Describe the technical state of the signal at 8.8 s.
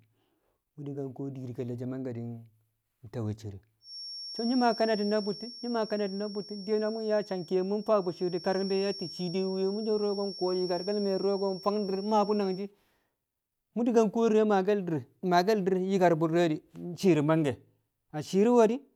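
A feedback whistle spans 3.79 to 12.70 s, a thin, steady 5.5 kHz tone well under the speech, likely a speaker-microphone loop poised right at the feedback point.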